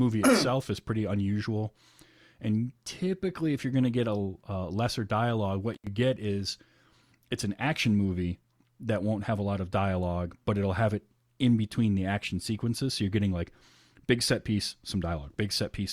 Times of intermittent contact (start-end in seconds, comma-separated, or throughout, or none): 5.74-5.87